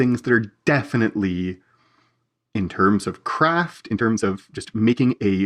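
It's a speech clip, and from 3.68 s to the end at 5.46 s there's a time-stretched section: the pace suddenly jumps to about 1.67 times normal and sounds rushed while the pitch holds steady, likely from software squeezing that stretch to fit a length.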